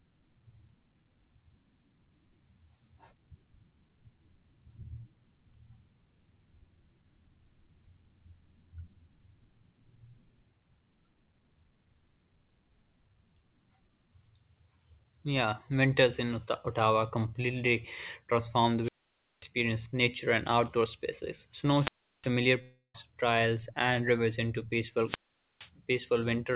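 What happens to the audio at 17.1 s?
Nothing goes wrong at 17.1 s: the speech runs on intact, carried through the call path with the narrowband G.711 A-law sound that holds nothing above 4 kHz.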